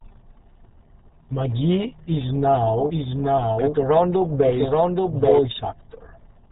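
From start to finish the speech carries RealAudio 14.4 codec damage: a brick-wall cut-off at 4 kHz leaves a spectrogram blank above that line, while heavy low-rate coding, which fits an 8 kbit/s dial-up codec, makes the voice muffled and gargly, with smeared, blotchy harmonics.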